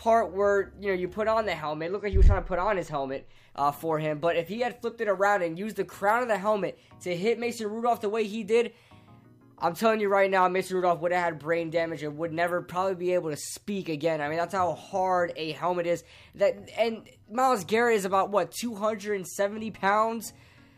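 From 1.63 to 3.36 s the audio turns dull and veiled at the very top: channel delay (comb filtering). One channel arrives a tiny fraction of a millisecond late, a couple of samples, and summing to mono cancels content around 10 kHz. With so short an offset, only the first notch falls in the audible range, so it can pass for a low-pass filter. The difference is that the notch is fixed and stays still, without the sweeping swirl of flanging.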